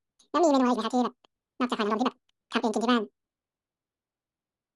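From start to finish, the audio was read two samples at a time (double speed). The reader grouped each pair of samples into a single frame, as if the stream had two channels or samples twice as wide, so half the expected time passed per sample. The speech therefore runs at twice its proper speed and sits a full octave, 12 semitones, too high.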